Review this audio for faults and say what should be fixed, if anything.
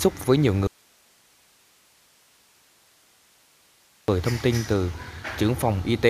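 An audio dropout to a faint residue runs from 0.67 to 4.08 s. For about 3.4 s the sound cuts abruptly to hiss roughly 35 dB below the signal. The likely cause is a lost source feeding a still-live path. Unlike a pause or fade, both edges are sudden and the noise floor persists. Secure cables and connections and monitor input levels during recording so a lost feed is caught and fixed straight away.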